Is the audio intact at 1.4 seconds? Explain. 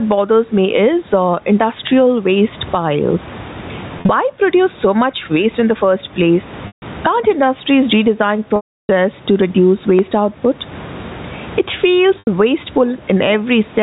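No. Gain pumping runs throughout: the gain swings around 20 dB, pulled down on loud sounds so loud and soft parts sit closer in level and the sound is squashed, likely from excess gain driving a fast limiter.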